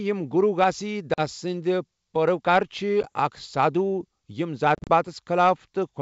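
Packet loss on an ADPCM call cuts hard-edged silent gaps: 40 ms at 1.14 s after "گُروٗ گھاسیی", 10 ms at 3.03 s, and around 90 ms scattered across 4.75–4.90 s. The decoder's predictor loses sync, so the sound returns slightly distorted before settling. These show as near-flat waveform gaps and blank vertical spectrogram stripes.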